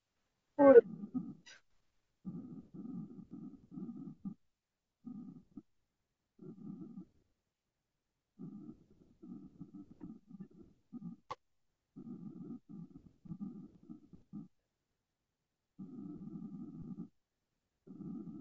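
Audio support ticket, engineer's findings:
Speech rough and grainy throughout, noise filling gaps between harmonics, thin synthetic top band. Likely low-delay AAC compression (AAC-ELD): short frames resolve pitch poorly, consistent with roughly 32 kbps.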